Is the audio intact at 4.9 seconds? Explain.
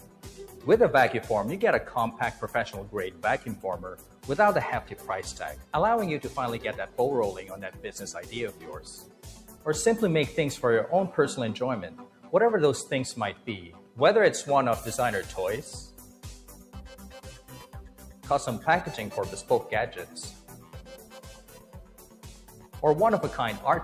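No. From 4.92 to 5.09 s the sound is cut by the noise suppressor: it mistakes this stretch for noise and pulls it down by about 5 dB at its deepest for roughly a sixth of a second. Unlike a dropout, the sound thins and sinks rather than vanishing.

This sits within a broader fault, a noise suppressor applied to sounds it wasn't built for. It treats sustained tones and decays as noise, so held material swings down by around 10 dB while sharp onsets pass. That uneven pumping, driven by how steady a sound is rather than how loud, distinguishes it from ordinary compression.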